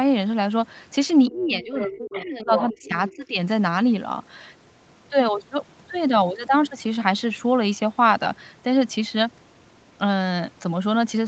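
From 1.28 to 1.46 s a faint second voice, the other side's voice leaking through, sits roughly 25 dB under the speech. This is likely loudspeaker echo the canceller left in. On a spectrogram it shows as weak, unrelated harmonic traces beneath the main ones.

From 1.3 to 2.96 s comes speech suppressed in double talk, likely the canceller ducking everything while both sides were active. The talker dips by up to about 20 dB for roughly one and a half seconds in total. The waveform envelope sags, and the upper harmonics thin out in pieces.

Within that stretch the leak returns at 1.81–1.9 s and 2.11–2.26 s, about 15 dB down. At 2.57–2.64 s it is nearly level with the talker, only about 5 dB below. At 3.04–3.16 s it is about 20 dB down. Each is a short patch of foreign formants.

A second suppression follows from 3.12 to 3.39 s, dropping the level by up to about 15 dB. It shows as a brief notch in the waveform.

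Through all of this the Opus call path leaves an empty band above 8 kHz on the spectrogram.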